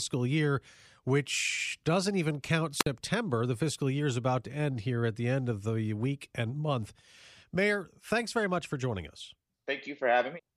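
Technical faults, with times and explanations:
2.79–2.86 s, wireless microphone squelch dropout: just after "which doesn't even count", the radio link fades and the receiver's squelch shuts the output, leaving a hole of near silence of about 56 ms before the speech returns as the signal recovers.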